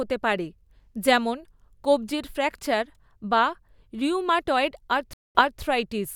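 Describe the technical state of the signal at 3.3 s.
At 3.3 s the speech signal is intact, with no audible technical fault at that moment.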